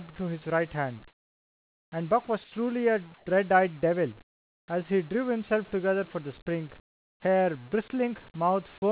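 Comfort noise in place of the background appears at 1.08–1.92, 2.44–2.52, 3.14–3.26, 4.22–4.68 and 6.8–7.22 s. In each pause the real background gives way to a flat, featureless hiss, about 3 to 23 dB quieter, most likely from discontinuous transmission halting the sender.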